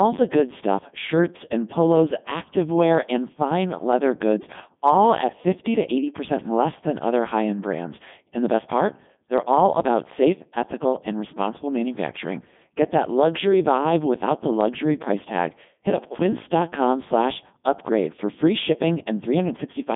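Robotic, buzzy speech runs through the whole clip, with nothing above 3.7 kHz and a narrow 150 Hz to 3.6 kHz band. This is a Codec 2 vocoder: the voice is rebuilt from sine waves using only pitch, voicing, energy and spectral envelope, which fits its top 3.2 kbit/s mode.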